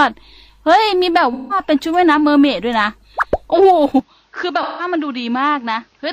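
Two short dropouts break up the audio, each lasting about 170 ms: from 1.33 to 1.57 s and from 4.62 to 4.85 s. Each sounds like a smeared, phasey patch. This is AAC frame loss with concealment. The decoder rebuilds the gap from the last good spectrum, and the length fits four lost frames. At 4.0 s the sound turns dull without any gap. Nothing remains above 6.8 kHz, the level falls by about 5 dB, and new background noise sits roughly 40 dB down. The likely cause is the input being switched to a poorer device.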